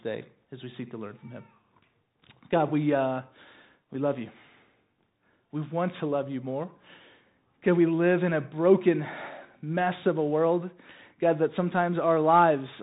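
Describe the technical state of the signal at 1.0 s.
At 1.0 s the speech carries the Bluetooth CVSD headset codec, as it does for the whole clip. Each sample is a single up-or-down bit with an adapting step. Nothing passes above 3.8 kHz. S sounds turn scratchy, and a granular hiss sits underneath.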